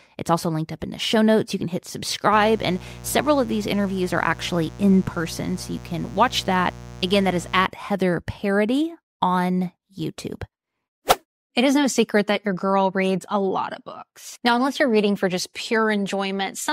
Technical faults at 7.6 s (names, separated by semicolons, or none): mains buzz